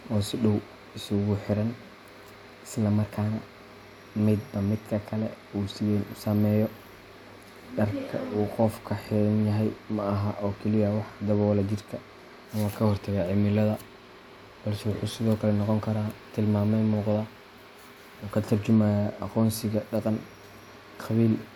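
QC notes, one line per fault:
No faults heard anywhere in this speech recording.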